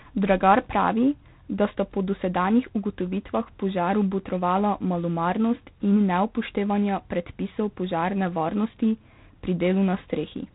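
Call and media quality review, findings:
G.726 ADPCM coding, throughout. Harsh, rasping hiss riding on the speech, rising and falling with its level; band ends near 3.9 kHz, nothing above. Probable component: narrowband telephony codec leg (ADPCM, 3 bits a sample), which fits 24 kbit/s. Too few bits to code the prediction error, so quantisation noise tracks the signal.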